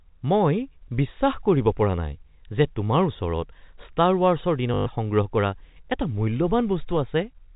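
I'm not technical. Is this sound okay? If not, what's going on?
No. From 4.74 to 4.86 s, there is packet loss with last packet repeated. Data went missing, so the last scrap was replayed, causing a brief robotic stutter.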